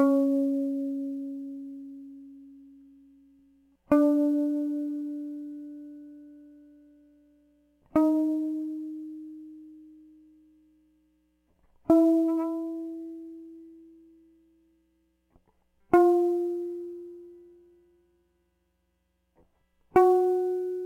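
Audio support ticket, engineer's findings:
Sample clock jitter, throughout the music. Hiss and grainy roughness riding on the signal, strongest on loud, bright passages, gone in quiet gaps. Probable component: converter clock. Timing wobble of roughly 5 µs turns waveform slope into error noise sitting about 35 dB under the music, so high-frequency content suffers most.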